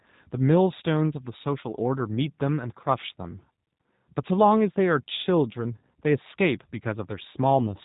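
The speech has been squeezed through a G.729 codec for the whole clip, consistent with an 8 kbit/s stream. The voice is rebuilt from a vocal tract model and sparse pulses, with nothing kept above 4 kHz, so it sounds dull, rough and plainly synthetic throughout.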